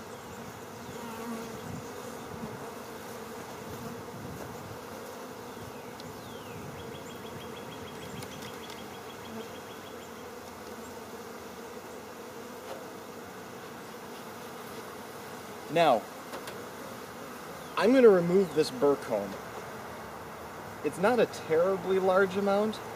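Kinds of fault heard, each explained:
No technical faults can be heard anywhere in this audio.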